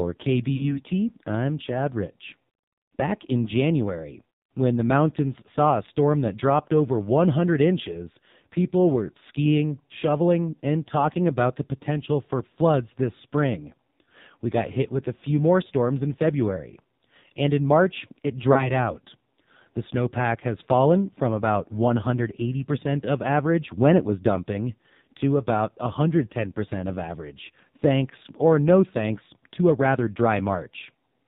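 Throughout, the speech carries heavy AMR narrowband mobile codec damage. The sound is buzzy and synthetic, which points to a low mode near 6 kbps. Nothing passes above 4 kHz, so a spectrogram shows a hard ceiling there with coarse, smeared harmonics beneath.

From 0.56 to 0.81 s come lost AMR speech frames, about 40 ms of missing audio, fitting two lost frames. The decoder repeated the last good pitch and vocal tract settings with falling gain. The sound is drawn out and fades before the voice returns weak or rough. A spectrogram shows harmonics stretched flat and fading, and the waveform envelope sags. At 18.54 to 18.72 s, one 20 ms frame is lost, giving a brief dip or warble.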